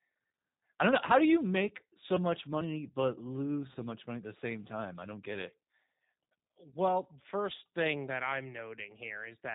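Throughout, the G.729 codec caps the speech at 4 kHz and gives it a rough, synthetic edge, unlike plain band-limiting, which would leave the tone smooth; it fits an 8 kbit/s stream. From 3.73 to 3.77 s, VoIP packet loss concealed by the speech codec stretches the last sound into a brief buzzy tone or coloured noise that fades, rather than a silent dropout, consistent with one lost 20 ms packet.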